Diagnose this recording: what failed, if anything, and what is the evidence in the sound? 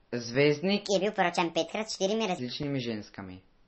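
Codec stage: throughout, the treble is cut off and the speech swirls watery and metallic on sibilants, likely MP3 compression at a very low bitrate, not plain low-pass filtering.

Playback or editing: from 0.85 to 2.39 s the voice runs 1.38 times fast, pitch up about five semitones. Tempo and pitch rise together, so this is a section at the wrong speed, likely a clock mismatch, not a pitch shifter.

Driver or buffer: at 2.63 s a 5.3 ms block of digital silence ticks, cutting out and back with no fade, which fits a 256-sample buffer left unfilled.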